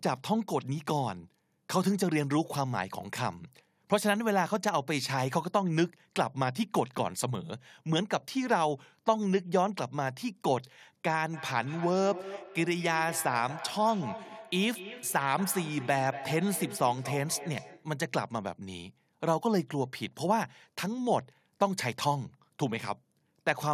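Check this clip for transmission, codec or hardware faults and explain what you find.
Two faults are present in this speech recording.

Clock slip clicks run from 0.15 s to 23.69 s: a faint, regular tick recurring about every 0.15 s, well over a hundred in total, heard through the speech and gone in pauses. The likely cause is two devices on unsynchronised clocks drifting apart by around 150 ppm. Each time the error reaches a whole sample, the stream drops or repeats one, and that discontinuity is the tick. The spacing is consistent with single-sample slips.

Feedback echo between two devices occurs from 11.33 s to 17.97 s. Each phrase returns roughly 200 ms later as a thinner, ringing copy, peaking at about 13 dB below the direct speech. Two devices in the same room are on one call, and one plays back what the other's microphone sent. That microphone picks the playback up again. Each device's echo canceller removes only its own output, so the returned sound passes through.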